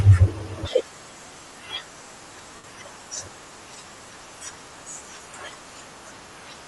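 Throughout, the speech has a breathy, grainy edge with a thinned top end, most likely from Bluetooth LC3 compression replacing discarded high frequencies with filler noise. From 2.55 to 2.64 s, the sound smears into a noisy blur for about 82 ms. These are lost LE Audio frames, concealed by repeating the last spectrum with scrambled phase. The gap fits a run of roughly eleven 7.5 ms frames.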